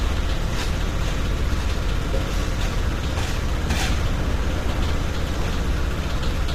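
From start to finish the sound carries plainly audible coding damage, likely from low-delay AAC compression (AAC-ELD). It has a rough, grainy texture, with noise filling the gaps between tonal components, and nothing above 15.8 kHz, which fits a bitrate around 32 kbps. The very short coding frames resolve fine tonal detail poorly. That graininess sets it apart from ordinary AAC or MP3, whose longer frames give swirly, smeared artefacts and pre-echo instead.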